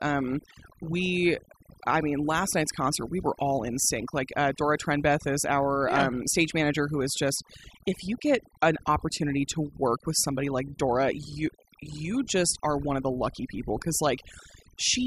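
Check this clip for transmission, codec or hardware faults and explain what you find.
One fault runs through the whole speech clip: overdone noise removal. Aggressive noise reduction pulls individual frequency bands down or out whenever they sit near the estimated noise floor, taking quiet speech detail with them. The background drops and breaks up into twinkling specks.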